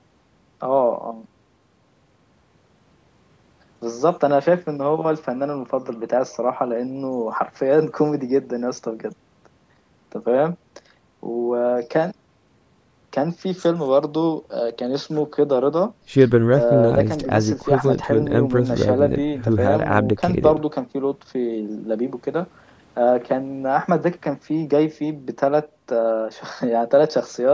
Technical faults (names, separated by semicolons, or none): none